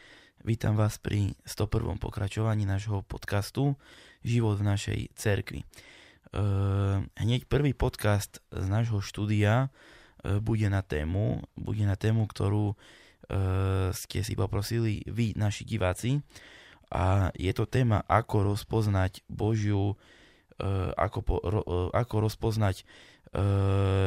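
DAB burbling at 21.67 s, just after "ako po": a brief watery blip where a few residual bit errors corrupted the MP2 audio data, putting noise into single sub-bands.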